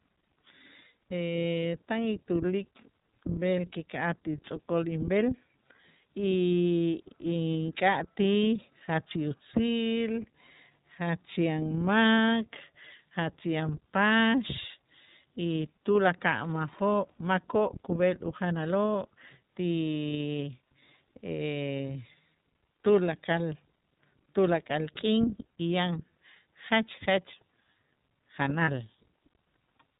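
iLBC codec coding runs through the whole speech clip. This narrowband VoIP codec codes each frame's excitation independently, and it passes nothing above 4 kHz, so the speech sounds boxed-in and dull at the top. The codec damage is plainly audible: the voice is intelligible but has a rough, slightly synthetic, buzzy texture where the excitation is approximated. The bandwidth and grain fit iLBC's 30 ms frame mode at 13.33 kbps.

Lost iLBC frames occur at 28.64 to 28.69 s, near the end. About 30 ms of coded audio never reached the decoder, which points to a single dropped 30 ms frame. To cover the gap, the decoder repeated the last pitch cycle blended with noise, so the moment sounds like a briefly held, faintly buzzy, breathy vowel. Since each iLBC frame decodes on its own, the speech snaps back almost immediately afterwards.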